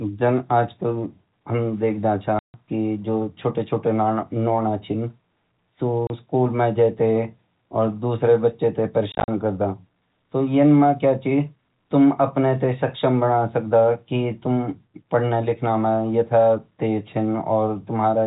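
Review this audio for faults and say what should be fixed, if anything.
Packet loss filled with silence at 2.39–2.54 s after "देखद छ", 6.07 s (30 ms), and 9.12–9.28 s after "और दूसरा बच्चा तैं". Lost packets were replaced by silence, leaving hard-edged holes that fit 10 ms packets. Add packet loss concealment and a jitter buffer so missing packets are interpolated rather than muted.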